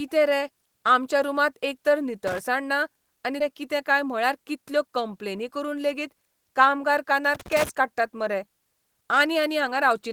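A worn or dirty contact somewhere in the cable path makes and breaks as it shifts, chopping the signal, which produces loose connector crackle in this speech clip: an irregular scratchy burst from 2.27 to 2.39 s, just after "रे आमच्या रूमांत एकतर" and before "ना आनी", and a longer one from 7.35 to 7.69 s, following "करून लेगीत कामगार कानार". At 3.40 to 3.53 s a stretch of audio was dropped while later audio was already queued behind it, producing a skip ahead: roughly 300 ms of speech is gone, and the two sides are joined by only about 7 ms, so the sound jumps forward almost seamlessly. Right after that, from 3.98 to 4.57 s, the jitter buffer was holding more audio than it aims for and trimmed short pitch-period slices to reduce the delay, about 40 ms in total. This jitter buffer speed-up runs the speech at 106% with its pitch unchanged, so the stretch leading into "कंप्लेनी करून लेगीत कामगार" sounds slightly hurried.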